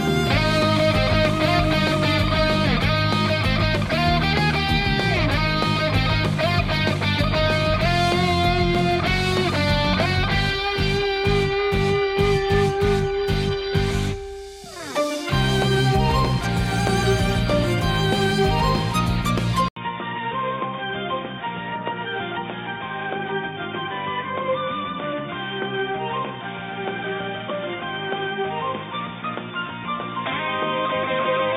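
At 19.68 s, after an 80 ms gap, the sound turns dull and quieter. Nothing above 3.6 kHz remains. The input likely switched to a poorer device.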